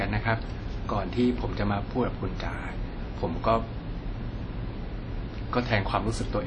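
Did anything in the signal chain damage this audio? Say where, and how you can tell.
Yes, at the codec stage, throughout the speech. Nothing reaches above 10 kHz, and the speech rings and smears, with hiss that breathes with the signal. This is likely WMA compression: long transform blocks spread quantisation noise, and the damage fits about 32 kbps.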